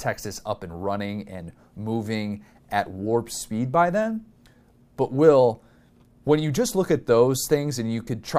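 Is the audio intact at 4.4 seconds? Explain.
Yes, the speech at 4.4 seconds is intact, with no audible dropout, click, distortion or other fault at that moment.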